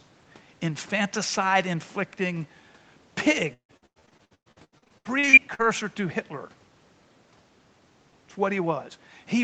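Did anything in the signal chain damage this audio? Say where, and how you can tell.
Yes: repeated packet loss in the network stage between 3.53 and 5.61 s. Twenty holes, the longest 153 ms, were patched by stretching the preceding sound, so nearly half that stretch is concealment, giving choppy, robotic speech with pieces missing, over an Opus-like call path cut off at 8 kHz.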